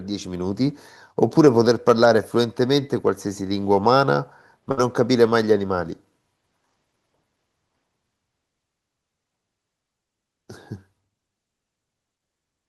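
At 4.71 s the speech breaks up in a burst of packet loss lasting until 4.79 s. The receiver extends the last sound for about 58 ms, fading as a held buzz or hiss, then resumes with roughly 60 ms of audio gone.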